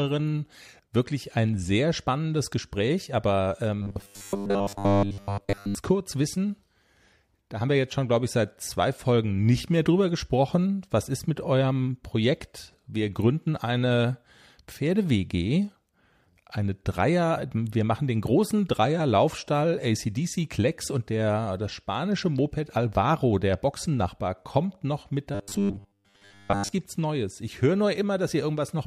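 From 3.82 to 5.75 s, before "kurz wissen", and from 25.35 to 26.75 s, after "kommt noch mit", the speech becomes a rigid 100 Hz buzz: robotic sound, likely from repeated short buffers of about 10 ms replacing most of the audio.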